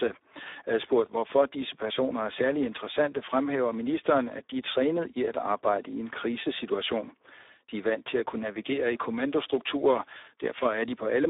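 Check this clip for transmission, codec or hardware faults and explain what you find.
One fault runs through the whole clip: Speex codec damage. The speech sits in a 300 Hz to 3.7 kHz band, with nothing above 3.8 kHz. Too few bits go to the excitation, which points to about 8 kbps. The speech comes out noisy, hoarse and heavily degraded.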